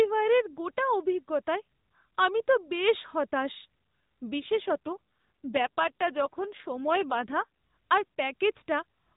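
From 4.40 s to 7.45 s the speech turns rougher, buzzier and more synthetic, then recovers. This is an AMR rate drop: the narrowband mobile codec, which elsewhere carries the speech with only light damage, switches to a lower mode, here consistent with 12.2 down to 5.9 kbps. On a spectrogram the 4 kHz ceiling stays put and the waveform shows no gap, but the harmonics blur and fine detail thins across that stretch.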